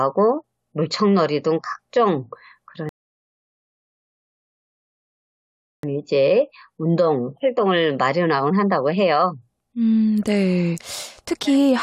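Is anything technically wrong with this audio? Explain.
Yes. From 2.89 to 5.83 s there's a rebuffering stall: playback ran dry and waited for data, giving about 2.9 s of silence before the speech picks up exactly where it stopped.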